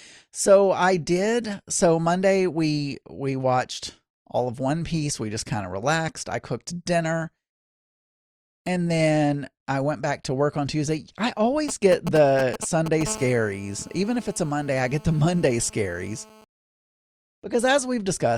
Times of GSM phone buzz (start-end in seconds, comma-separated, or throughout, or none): 13.07-16.44